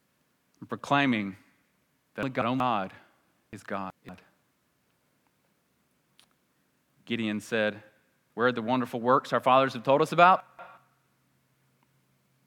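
At 2.23 s, 3.53 s and 10.40 s, just after "fathers have told us", the speech jumbles briefly. These are chunks out of order: blocks of about 186 ms play late, behind the audio that should follow them. That is one chunk late at 2.23 to 2.60 s and 10.40 to 10.77 s, and two late at 3.53 to 4.09 s. Unlike a dropout, nothing is missing. The sound is only reshuffled, with hard joins.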